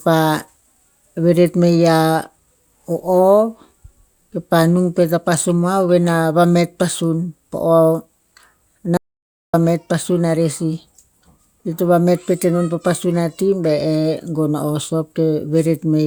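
An audio dropout to silence in this speech clip runs from 8.97 to 9.54 s, about 0.57 s of silence before "pasun arer sih", likely from the input link failing while silence was recorded.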